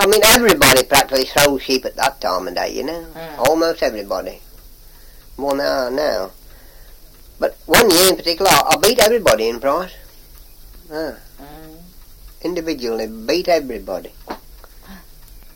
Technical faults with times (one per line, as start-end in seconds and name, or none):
0.01-2.06 integer overflow
3.45-3.47 integer overflow
7.74-8.09 integer overflow
8.46-9.32 integer overflow